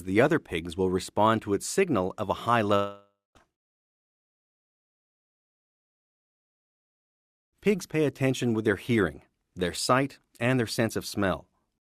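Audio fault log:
2.75–3.37 s, long network dropout: the sound breaks off and is continued by a synthetic buzz- or hiss-like fill that decays over roughly 0.6 s, ending in about 220 ms of silence before normal audio resumes at 3.37 s with about 600 ms of material absent. The likely cause is a stall in packet delivery: the receiver extended the last sound to cover the gap, ran out of plausible fill, and muted until fresh audio arrived, skipping what was lost.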